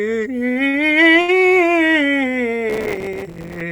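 At 0.53, 0.70 and 1.21 s the music briefly stalls. These are short stalls from a late packet. The jitter buffer ran dry, so the last sound was held for 24, 36 and 68 ms, then playback resumed where it left off. Nothing is lost.

From 2.70 to 3.61 s, processor overload crackle tears through the music. The processor kept missing buffer deadlines, roughly a hundred times. Each miss drops a tiny gap of silence, which fits buffers of about 3 ms. Together the gaps sound like gritty crackle.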